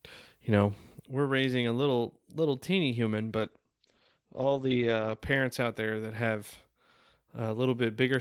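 From 3.39 s to 5.25 s the speech turns rough and muffled, a call bitrate drop: the encoder fell from 32 to 11 kbps for about 1.8 s and narrowed its bandwidth from 20 kHz to 8 kHz. Unlike packet loss, nothing drops out; the sound stays continuous but coarsely coded until the rate recovers.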